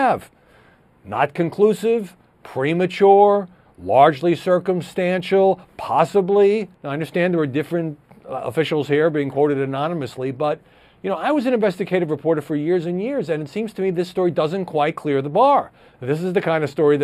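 Channel delay with comb filtering runs for the whole clip. One channel arrives a few samples late, a gap of about 0.07 ms, and when the two are summed to mono the shared content cancels at evenly spaced frequencies. With a delay this short, the first cancellation falls at around 7 kHz, so a fixed notch sits in the upper range and lends the sound a hollow, phasey colour that does not move over time.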